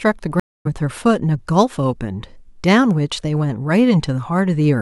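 A speech clip with a stream reconnect from 0.40 to 0.67 s. The audio drops out for 255 ms. The connection broke and the player restarted its decoder mid-stream. When sound returns, it resumes roughly 0.2 s further on, so a short stretch of speech is skipped.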